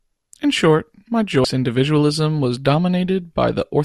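A stretch of damaged data in the compressed stream behind this speech recording corrupts the frames between about 1.41 and 1.45 s. Fed bytes it cannot parse there, the decoder loses frame sync and skips forward to the next valid header, so right after "short my" a brief glitch of about 35 ms cuts into the sound before "individualism was" resumes and the recording carries on from the recovered frame.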